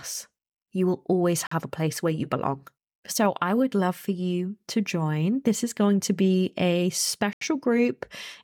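At 1.47 to 1.52 s, after "will always", the speech drops to silence for about 45 ms before "a place where you". At 7.33 to 7.41 s, after "going to be a", an 82 ms silent gap follows. Both are Bluetooth stalls, likely from interference delaying packets until the headphone buffer ran empty. Each gap is full silence rather than a crackle or warble.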